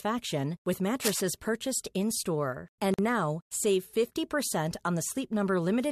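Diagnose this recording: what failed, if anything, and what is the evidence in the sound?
In the analogue wiring, a burst of dense, uneven scratching sits over the speech from 0.99 to 1.21 s, only slightly quieter than the speech itself. It is short-lived and irregular, not a steady hum or hiss, and that pattern points to cable scratch noise, likely from a worn cable, plug or control being moved. The shifting contact resistance modulates the signal path and adds this rough, rustling texture for about a fifth of a second.

At the codec stage, a gap at a join of encoded pieces opens at 2.94 s, just before "now save". The speech drops into a gap of about 45 ms and then resumes where it left off, with slightly smeared edges. The pattern fits two separately encoded segments spliced without trimming, so the first segment's padded final frame and the second segment's start-up delay both remain as dead air in continuous speech.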